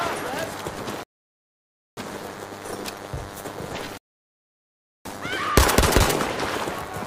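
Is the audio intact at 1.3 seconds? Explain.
No. At 1.3 s the playback is inside a rebuffering stall that runs from 1.03 s to 1.97 s. The player ran out of downloaded audio, so the sound drops to silence and then picks up exactly where it left off, adding about 0.94 s to the timeline. Unlike a dropout, nothing is missing on either side of the gap. The sound is simply paused and then continues seamlessly, with no skipped material and no jump in the flow.

Running through the whole clip, and so present around 1.3 s as well, is DECT cordless phone buzz. A nearby handset or base station transmits a radio burst every 10 ms, and the audio circuitry rectifies it into a 100 Hz buzz, sitting roughly 15 dB below the main sound. Mains hum can share that fundamental, but it sounds smooth and rounded. This buzz is thin and rasping because each pulsed burst carries a dense stack of harmonics.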